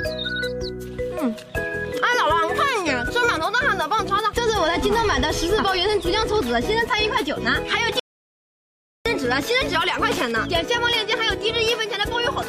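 An audio dropout to silence runs from 8.00 s to 9.06 s, removing about 1.06 s of material. The sound stops abruptly mid-flow and resumes just as suddenly, and the gap between is dead digital silence with no room tone or background noise at all. That points to the input signal being lost while recording carried on writing silence, likely from a momentary disconnection, link failure or mute. Whatever occurred during that second is unrecoverable.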